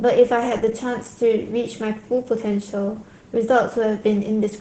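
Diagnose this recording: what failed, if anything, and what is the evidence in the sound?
Codec stage: Opus voice compression throughout. The speech is muffled, hoarse and a bit robotic, capped near 8 kHz, with coarse SILK-style excitation that points to roughly 10 kbps.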